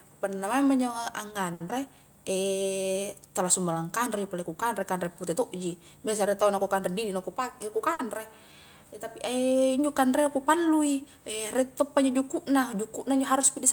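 Two late-packet stalls and a short concealed packet loss break up this speech recording, along with a stretch of jitter buffer speed-up. The first short stall from a late packet runs from about 1.53 to 1.75 s. A packet didn't turn up in time, the jitter buffer drained, and the receiver held the last sound for 70 ms until the data arrived. Nothing is lost, but that sound hangs on a beat too long with a slight buzz or dip, and the playout delay ends up 70 ms longer. Inside that same stretch, at 1.68 to 1.71 s, there's a short concealed packet loss: 20 ms of audio never made it to the decoder, and 10 ms of continuation from the preceding sound papers over the gap, so you get a quick smear or wobble rather than a clean dropout. From 6.98 to 7.69 s the jitter buffer speed-up kicks in. The buffer was holding more than it wanted, probably after delayed packets arrived together, so the receiver trimmed out small pitch-period chunks, around 70 ms in total. 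Playback runs at about 109% speed with the pitch unchanged, which makes that bit sound rushed. Right after, from 7.93 to 8.01 s, a second short stall from a late packet stretches the sound by 60 ms, again with nothing missing, and the delay grows by another 60 ms.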